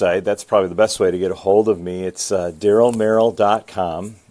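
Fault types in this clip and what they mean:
Aliasing: present throughout the speech, this happens when audio is resampled to a lower rate without first removing content above half that new rate. Here the fold point sits at 11 kHz, consistent with a conversion to roughly 22 kHz. Energy above it mirrors back down as unrelated tones, sitting around 25 dB below the signal. Sibilants take on a gritty, metallic edge, and the spectrum stays dense right up to 11 kHz.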